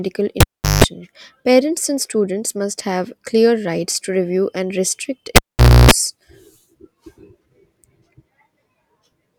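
At 0.40 s the speech is interrupted by a cable pulled and plugged in: a pop as the live connection breaks, near silence for about 0.39 s, then a 50 Hz mains buzz lasting 175 ms while only the plug tip makes contact, and a second pop at 0.84 s as the full connection restores the signal. The same fault recurs at 5.36 s, with a longer 0.5 s dropout, a 60 Hz buzz of about 0.3 s, and a closing pop at 5.91 s.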